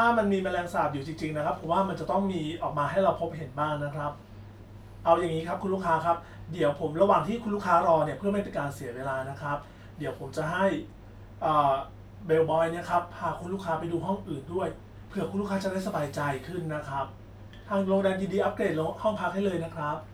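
No technical faults can be heard in this recording.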